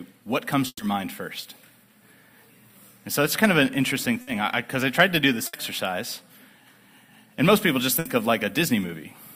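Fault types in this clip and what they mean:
burst of packet loss: At 0.67, 4.21, 5.47 and 7.99 s the last sound is held and faded over the gap, about 60 ms each but 120 ms at 0.67 s, that one ending in 40 ms of silence. Audio resumes with that stretch skipped, unlike a dropout's plain silence.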